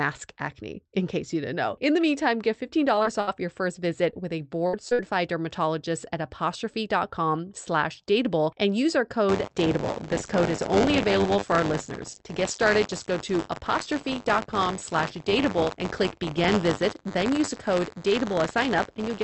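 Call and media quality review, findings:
Short concealed packet loss at 2.95, 3.03 (after "the meantime get"), 4.11 and 4.89 s. About 20 ms missing each, filled by the jitter buffer's concealment. Brief smear or wobble. Spectrogram shows a short patch of flattened, held harmonics or shaped noise with a soft blend at the right edge.

Burst of packet loss at 3.21, 4.67 (after "with a") and 4.93 s, the last immediately following the 4.89 s dropout. About 60 ms missing each, concealed by extended last sound decaying to a held buzz or fading hiss, then a jump ahead. Spectrogram shows flat harmonic bands or noise fading out, then an abrupt resumption.

Buffer tearing from 9.28 s (after "dateable and use our") to the end. Robotic 100 Hz buzz present only under signal, consistent with a 10 ms playback period where writer and reader have slipped. A small slice of each period replays audio about 40 ms old. 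Waveform shows hard discontinuities every 10 ms; spectrogram shows vertical lines at that rate through voiced regions. The call path's spectrum tops out near 8 kHz, consistent with a wideband Opus setting.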